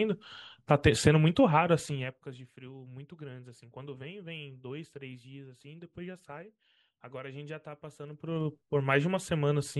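Zipper noise at 1.81 to 2.23 s and again at 7.99 to 8.50 s: the speech level drops by around 20 dB, then rises by the same amount, in unsmoothed 2 dB jumps about twenty times a second. Each jump clicks, giving a fast ticking buzz during both moves.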